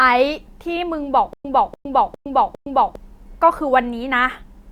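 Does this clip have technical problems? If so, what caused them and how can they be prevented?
Yes. From 1.33 to 2.95 s there is a stutter with silent gaps: one 291 ms burst of speech plays four times at a steady 405 ms period, separated by 114 ms of digital silence. A plain dropout goes silent only once, but here the same fragment keeps returning, and the speech due in that span is lost. The likely cause is a stalled stream replaying its last fragment on each retry. Deeper playback buffering and a steadier connection would prevent it.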